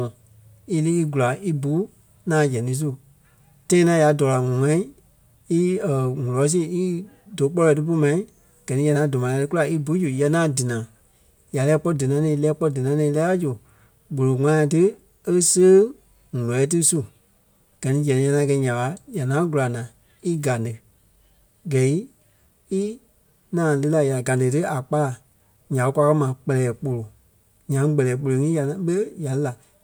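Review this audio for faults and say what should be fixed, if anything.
Nothing needs fixing: the speech signal stays technically intact throughout, with no audible faults to report.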